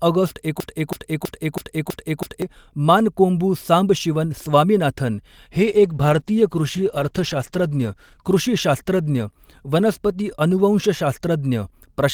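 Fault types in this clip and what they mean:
broken-record loop: from 0.6 to 2.42 s one 325 ms fragment repeats identically six times, likely a stalled stream; a stutter would vary rather than copy exactly.
call bitrate drop: from 5.61 to 11.17 s the rate falls from 40 to 14 kbps, leaving speech rough and muffled without gaps, unlike packet loss.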